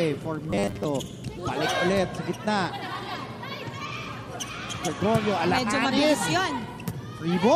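Robotic sound from repeated short buffers runs from 0.51 to 0.85 s in this audio: a rigid, metallic buzz at 100 Hz that follows the original sound only roughly. The likely cause is new audio arriving too seldom, so the playback path fills the gaps by looping the most recent stretch, about 10 ms long given the 100 Hz rate, while the real material in between is skipped. Roughly 70 percent of that span is repeated rather than fresh.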